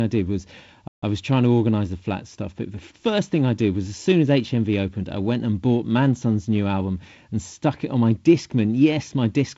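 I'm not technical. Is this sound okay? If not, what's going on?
No. A playback stall at 0.88 to 1.03 s cuts the speech to silence for about 0.15 s after "did was", resuming at "I was trying to". The player likely briefly ran out of data.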